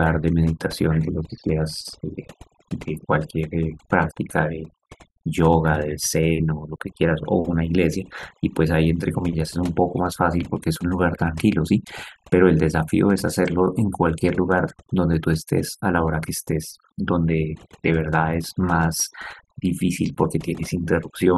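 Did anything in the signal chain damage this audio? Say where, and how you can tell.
Yes. A noise reduction stage in the processing chain was set far too aggressively, and the overdone noise removal runs through the whole speech clip. It cuts individual frequency bands down or out whenever they sit close to its noise estimate, and the quieter parts of the speech get treated as noise too. You can hear it in the pauses, which drop to near silence with twinkling specks, and in the speech itself, where the quieter parts are stripped away.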